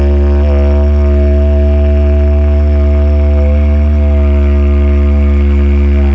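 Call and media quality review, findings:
The audio shows no faults; having passed through the call path, it carries nothing above 8 kHz, which fits a wideband call codec such as G.722.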